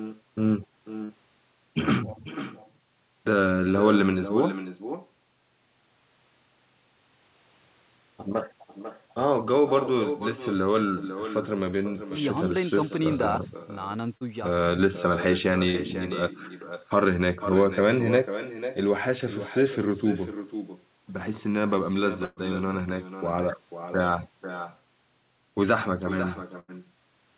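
All the way through there's echo with no canceller. The far end is clearly playing the call over a loudspeaker, and its mic feeds it straight back, so every phrase gets a thin ghost about half a second later, sitting about 11 dB under the speech. It's sitting on top of a call path that tops out around 4 kHz, which fits a narrowband G.711-style link.

At 1.04 to 1.12 s there's a burst of packet loss. About 60 ms of audio never made it, and the receiver papered over roughly 52 ms of that by stretching the last sound and fading it. You hear a short held buzz or hiss, then the speech jumps ahead a little.

Around 14.17 to 14.24 s and again at 15.71 to 15.77 s you get short concealed packet loss, each about 30 ms missing. The decoder patched the gap by extrapolating from what came just before and then crossfading back into the real signal. It comes across as a quick smear or little wobble, and a brief consonant in there can just disappear.

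Two bigger bursts of packet loss follow. At 22.25 to 22.40 s about 120 ms went missing, with roughly 118 ms of that filled by a drawn-out, decaying continuation. Then at 26.60 to 26.71 s about 90 ms is lost, with around 86 ms concealed, and the same fading hold is followed by a skip forward.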